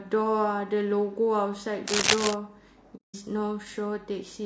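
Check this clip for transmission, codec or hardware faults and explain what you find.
Three faults are audible in this speech clip.

Throughout, the voice sounds rough and grainy, with noise between harmonics and a thin, synthetic top band, likely low-delay AAC compression (AAC-ELD) whose short frames resolve pitch poorly, consistent with about 32 kbps.

From 1.87 to 2.34 s, a dense, uneven scratching rustle sits about as loud as the speech. This is likely cable scratch noise from a worn contact whose resistance fluctuates rapidly.

From 2.96 to 3.15 s, the sound fades softly into a hole and back. This is AAC frame loss with muting: roughly 180 ms of zeroed spectrum, consistent with six frames, with overlapping windows smoothing the edges.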